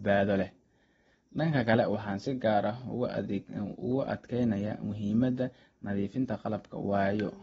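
Speech carrying AAC compression throughout, likely from AAC-LC at a low bitrate near 24 kbps: nothing sounds above about 8.9 kHz, and sibilants fizz and warble audibly. That swirling texture separates it from a plain low-pass filter, which dulls cleanly.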